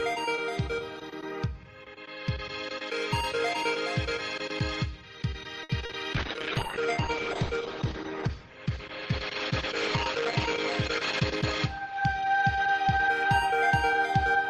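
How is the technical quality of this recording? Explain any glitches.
The recording has three network-related glitches clustered in its middle, all typical of a live call.

At 5.63 to 5.72 s there is a short stall from a late packet. A packet arrived late and the jitter buffer ran dry, so the receiver stretched the last sound for about 60 ms, then resumed where it left off. Nothing is lost, but the sound holds too long, and playback delay grows by 60 ms.

At 5.85 to 5.92 s comes a short concealed packet loss. About 40 ms of audio never reached the decoder in time. The receiver filled the gap by extending the preceding sound and blending back into the real stream, which smears or wobbles that moment.

From 6.15 to 12.58 s there is a call bitrate drop. The bandwidth estimate fell and the encoder went from 32 kbps to 9 kbps, staying at its lowest for about 4.4 s. Audio bandwidth narrowed from 20 kHz to 8 kHz, so the sound turns muffled and coarse until the bitrate recovers before the end.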